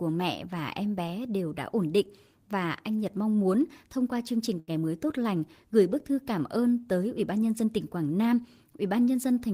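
Right after "thông qua chương trình", around 4.59 to 4.71 s, there's a short stall from a late packet: the jitter buffer ran dry, so about 82 ms got stretched out before "mới tốt lành gửi" resumed intact.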